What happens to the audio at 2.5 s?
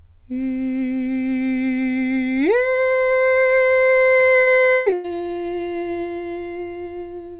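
Nothing goes wrong at 2.5 s: the music carries straight through that moment without a break or glitch, with the call path's narrowband character (nothing above 4 kHz) present as it is throughout.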